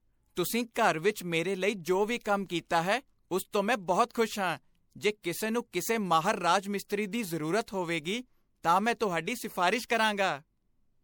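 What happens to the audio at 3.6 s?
At 3.6 s the speech carries generation loss, which runs through the whole clip: it was likely re-encoded as MP3 about three times, at a quality that fits 96 kbit/s, with each pass requantising on a shifted frame grid. The errors stack, so the sound turns swirly, smeared and hollow beyond what that bitrate alone would give, and consonant onsets blur, even though content still reaches up to 20.9 kHz.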